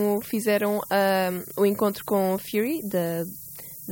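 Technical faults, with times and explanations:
Throughout, low bit depth with noise shaping: the speech is carried by only 6 bits, and the rounding error is fed back so that it is pushed toward high frequencies. The result is a steady, thin hiss that rises sharply toward the top of the band and sits only around ten dB below the speech. On a spectrogram this shows as a constant noise floor brightening toward the upper edge, and the waveform looks coarsely stepped even in quiet stretches.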